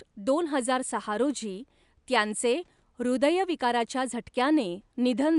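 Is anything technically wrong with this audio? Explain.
No, nothing stood out on listening, with only a faint room background sitting about 47 dB below the speech, which belongs to the recording itself.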